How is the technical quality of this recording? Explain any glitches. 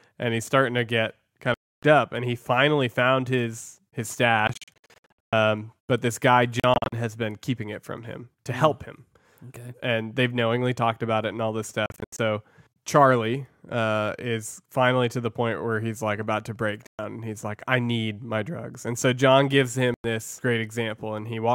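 The speech is repeatedly interrupted by silences, likely a Bluetooth dropout: audio packets arrived too late and were discarded, so output cut out and then resumed as though playback had continued underneath.

The gaps fall at these points:
1.54–1.83 s, after "starting to get kind"
4.47–5.33 s, between "finally found his his" and "but this guy", choppy rather than solid
6.60–6.93 s, also choppy
11.86–12.19 s, also choppy
16.87–16.99 s, after "like about to break"
19.94–20.04 s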